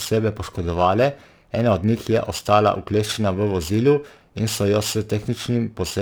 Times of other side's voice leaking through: none

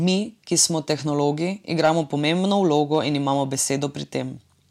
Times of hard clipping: 1.80-1.91, 2.52-2.99

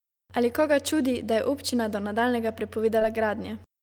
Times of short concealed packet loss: 2.99-3.03

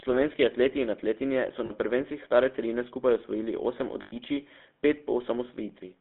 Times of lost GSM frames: 1.66-1.71, 4.02-4.13

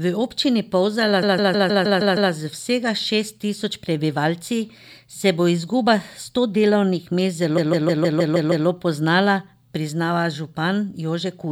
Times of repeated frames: 1.22-2.31, 7.57-8.66

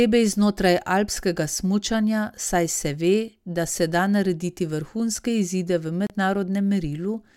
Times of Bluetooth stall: 6.07-6.10

